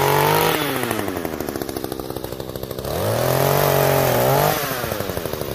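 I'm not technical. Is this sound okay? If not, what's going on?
No. From 0.13 s to the end there is a fast, faint ticking, about 25 ticks a second, roughly 150 in all, which blends into a soft rattle. These are clock slip clicks, likely from two pieces of equipment running at slightly different speeds, so a single sample keeps getting dropped or doubled. Unlike random crackle, the ticks are evenly spaced, are loudest on strong sustained or high sounds, and disappear in silence.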